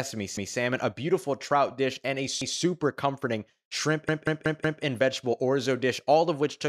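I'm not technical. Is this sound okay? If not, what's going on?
No. This clip has a repeated buffer fault. New audio didn't reach the player in time, so it replayed the last fifth of a second, making an audible stutter. It happens just before "a beautiful trout dish" (0.37 to 0.56 s), after "trout dish and a" (2.42 to 2.60 s), and after "comforting shrimp" (4.09 to 4.83 s), where the same piece repeats four extra times.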